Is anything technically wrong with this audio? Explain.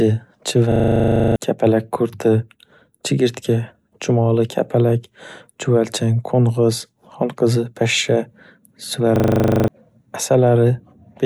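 Yes. Twice the speech stops and turns into a rapid rattling buzz repeating 25 times a second, from 0.72 to 1.36 s and again from 9.16 to 9.68 s. This is a system hang loop: the computer froze while the sound hardware kept replaying the same 40 ms buffer. Roughly 0.7 s and 0.5 s of speech are lost.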